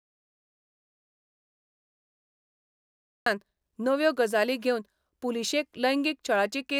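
Speech, with an audio dropout to silence at the very start. The clip opens in silence, and this runs until 3.26 s. There is no room tone or hiss in that span, just silence. The speech then cuts in abruptly, already mid-flow. Whatever was said before 3.26 s is missing. The likely cause is a lost input, such as a disconnected device, a failed link or a stray mute, while the recorder kept writing silence.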